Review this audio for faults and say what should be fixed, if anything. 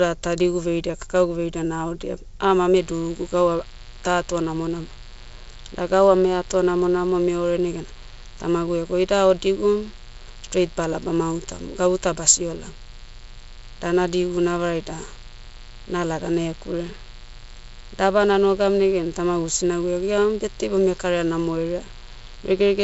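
A mains buzz starts at 2.80 s and runs to the end of the speech. Switching spikes, twice in every 60 Hz mains cycle, leak into the signal path and produce a raspy tone roughly 25 dB below the voice. On a spectrogram it appears as evenly spaced horizontal lines at multiples of 60 Hz, climbing toward the 7.7 kHz ceiling of the wideband telephone coding. The waveform shows a repeating spiky ripple in the pauses. It can be prevented with shielded, balanced cabling kept away from dimmers and power supplies.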